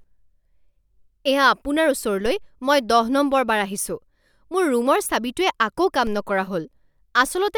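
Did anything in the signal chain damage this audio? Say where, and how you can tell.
Yes, there are two DC steps, at 2.26 s and again at 6.07 s. Each is a dull low thump laid over the speech, which carries on untouched. Somewhere around the converter or analogue input, the waveform's zero line jumps by about -23 dBFS and then sags back as a 2 Hz high-pass drains the offset away, over roughly a tenth of a second. That sudden baseline shift is the thump you hear.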